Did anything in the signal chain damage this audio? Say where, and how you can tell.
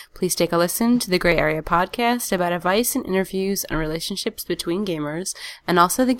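Yes. The driver or buffer stage likely dropped samples, losing about 0.7 ms each time, so the waveform jumps ahead. This causes three sharp clicks in the speech: at 0.47 s before "a listen to the", at 1.32 s after it, and at 2.38 s before "advice and".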